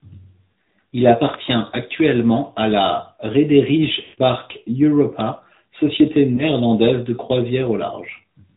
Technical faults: AMR narrowband mobile codec; electrical switching spike; lost AMR speech frames

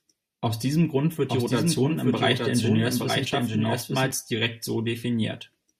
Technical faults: doubled audio track

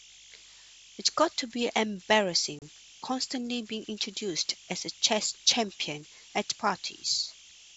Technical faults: converter idle tones; packet loss on an ADPCM call

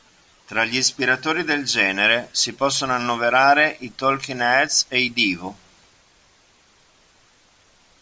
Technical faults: none

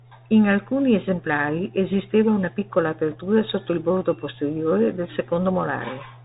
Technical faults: Bluetooth CVSD headset codec

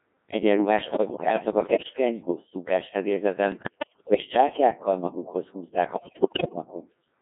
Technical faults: Codec 2 vocoder; bit errors on digital voice radio

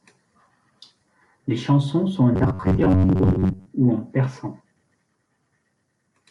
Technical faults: robotic sound from repeated short buffers

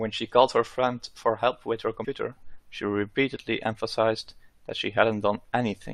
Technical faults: damaged data in a compressed stream

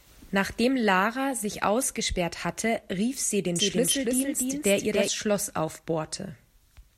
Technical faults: doubled audio track

